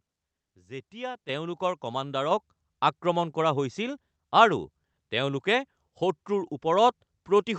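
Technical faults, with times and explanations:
1.29 s, microphone volume stepped up: the level of everything jumps by about 7 dB in a single step and stays there, because the call software judged the microphone too quiet and raised the device's input volume in one move. Unlike a talker leaning closer, the background noise rises by the same amount as the speech, and unlike a gain-control ramp there is no gradual swell. The same call-path sound, with highs cut near 8 kHz, continues after the step.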